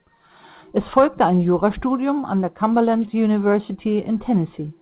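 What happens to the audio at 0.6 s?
Nothing goes wrong at 0.6 s: the speech passes through intact there, carrying only the narrowband sound of the call path, with nothing above 4 kHz, which fits a G.711 mu-law link.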